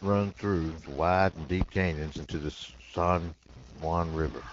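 Throughout the speech, distortion rides on everything, and pauses fill with noise. This points to a stuck bit, likely one converter bit held fixed.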